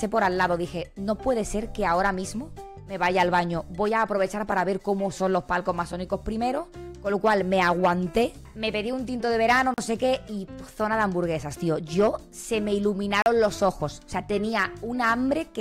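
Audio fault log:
9.74–9.78 s and 13.22–13.26 s, block of digital silence: a short hole, where 40 ms of samples dropped abruptly to silence.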